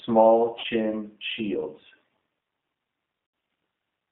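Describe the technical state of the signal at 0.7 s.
At 0.7 s the signal is recovering from VoIP packet loss concealed by the speech codec. The gap ran from 0.60 to 0.66 s, about 40 ms, which fits two lost packets. During it the decoder kept repeating its last pitch and filter and lowered the gain each frame. That turns the sound into a buzzy tone or a coloured noise that fades. Each frame builds on the one before. So at 0.7 s the speech is still weak or distorted while the decoder settles back.

The G.729 codec also shapes the whole clip, including this moment. It rebuilds speech from a vocal tract filter, a pitch predictor and a few pulses per frame. The sound points to an 8 kbit/s G.729A stream. The line band runs from about 150 Hz to 3.6 kHz, so the audio is thin and muffled. The codec damage is plainly audible. The speech sounds rough and synthetic.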